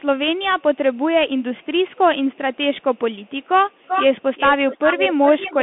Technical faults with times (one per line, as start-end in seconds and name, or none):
0.00-5.62 Bluetooth CVSD headset codec
0.39-0.99 echo leak
1.38-2.00 echo leak
2.33-5.62 echo leak